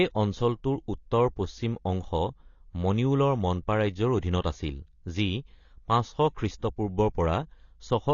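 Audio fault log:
throughout, AAC compression: The speech sounds dull and band-limited, with nothing above 7 kHz and plainly audible codec damage across the whole clip. The likely cause is AAC-LC coding at a low bitrate; the missing top octave and coarse texture fit a rate around 24 kbps. At that rate the encoder lowers its cut-off to spend its limited bits on the lower bands, so the high detail that gives speech its crispness is discarded.
4.41–4.44 s, pre-echo: Just after "মনিউলৰ মনপা ৰাজ্যৰ" and before "আছিল যি", a short hiss runs for about 29 ms ahead of a sharp onset, and the attack itself sounds smeared rather than crisp. The transform codec spreads its quantisation noise evenly across each block. That noise is sized for the loud attack, which falls late in the block, so it also fills the quiet moment just before it and is heard as a brief hiss ahead of the onset.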